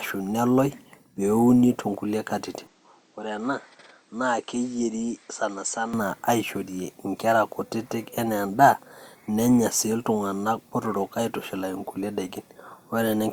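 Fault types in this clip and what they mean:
Input switched to a poorer device: from 2.67 to 5.94 s, between "too nkulie katitin" and "aishorie nkera kutitik enaa", the speech turns dull and boxy, losing everything above 8.3 kHz, dropping about 5 dB and gaining faint new background noise, likely from the recording input jumping to a lesser microphone.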